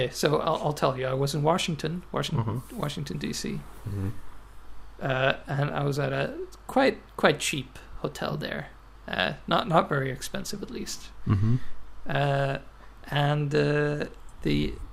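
DAB burbling appears at 5.35–5.43 s and again at 12.92–13.05 s. Bit errors that got past error correction corrupt audio samples, putting noise into single sub-bands. It sounds like short blips of noise. A spectrogram shows blocky patches flickering in isolated bands.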